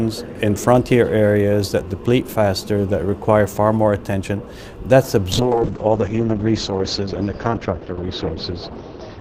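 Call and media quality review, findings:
Call bitrate drop from 5.33 s to end of clip: audio turns coarse and muffled, top end cut from 20 kHz to 6 kHz, worst for about 2.9 s. Opus encoder throttled by falling bandwidth estimate, consistent with 64 kbps dropping near 7 kbps.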